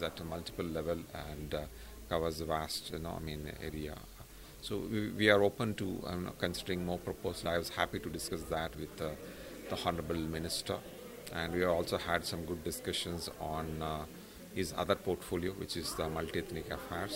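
At 7.45 s there's a skip ahead: roughly 0.7 s of audio got dropped while later audio was already queued, so playback jumps forward with no gap at all. Then from 7.57 to 9.47 s the jitter buffer speed-up kicks in. It's trimming tiny pitch-period slices to drain about a fifth of a second of backlog, so the sound runs around 112% speed, hurried but at the same pitch.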